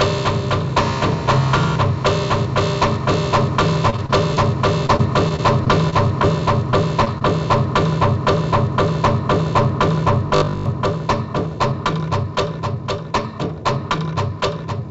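From 3.90 to 4.38 s and again from 4.86 to 6.25 s the sound turns choppy, with small pieces missing. This is repeated packet loss (robotic sound): four gaps, then seven, none longer than about 27 ms, each patched by extending the preceding audio before the next hole arrives.

Three quick smears or wobbles follow, at 6.70 to 6.75 s, 7.05 to 7.08 s and 7.18 to 7.23 s. Each is short concealed packet loss: about 20 ms of audio failed to arrive, and the receiver continued the previous sound to cover the hole before blending back into the real signal.

Between 10.28 and 10.66 s the audio becomes a rigid, buzzy drone at 50 Hz that covers most of that stretch. This is robotic sound from repeated short buffers, likely caused by the same 20 ms chunk being replayed while fresh audio was skipped. That period sets the fixed buzz pitch.

The call path itself carries nothing above 8 kHz, which fits G.722.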